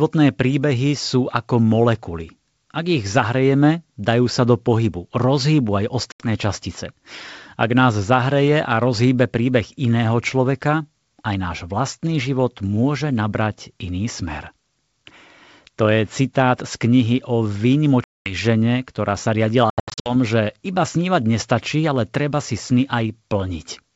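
Packet loss on an ADPCM call cuts hard-edged silent holes at 6.12–6.29 s after "do pohybu rozhýbu aj", 18.04–18.35 s before "žene ktorá sa", and 19.70–20.14 s, scattered before "že iba snívať nestačí". The wideband G.722 sound resumes slightly distorted, unlike smooth concealment.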